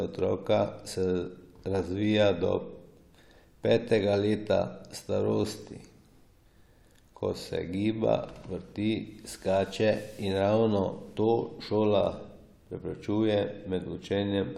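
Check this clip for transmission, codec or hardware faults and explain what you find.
Nothing turns up in this speech recording that points to a problem with the transmission, the codec or the hardware along the way.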